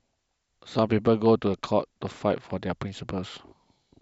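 A train of clicks runs from 1.06 to 2.51 s: about seven similar pulses at roughly 4.9 per second, unevenly spaced, peaking near the level of the speech. They sound like irregular ticking laid over the talking, likely interference from nearby equipment or a faulty connection or power supply.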